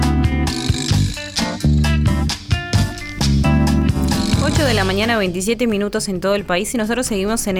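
Four sharp, isolated clicks sit at 1.28, 2.96, 3.82 and 5.70 s, likely from dropped samples: a fraction of a millisecond goes missing, so the waveform steps abruptly to a later value. Each shows on a spectrogram as a thin vertical line spanning the spectrum.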